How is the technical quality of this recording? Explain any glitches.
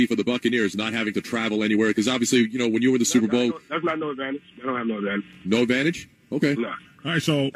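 The recording has no technical glitches to explain. No fault turns up anywhere in it, so there is nothing to time or trace back to a cause.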